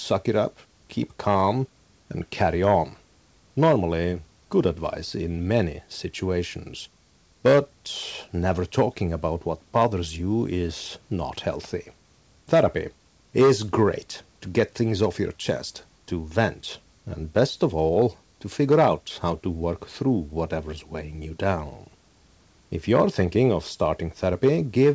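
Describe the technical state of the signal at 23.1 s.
At 23.1 s the speech signal is intact, with no dropout, glitch or distortion; only the ordinary band limit of the call codec, with nothing above 8 kHz, and faint room noise about 42 dB below the speech are present.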